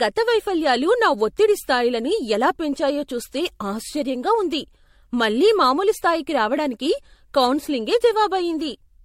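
Speech with generation loss all the way through: it's swirly, smeared and hollow, with soft blurred attacks and nothing above 16.5 kHz. That's likely from repeated MP3 re-encoding, roughly four passes at a rate that points to around 63 kbit/s, with each pass adding fresh quantisation damage.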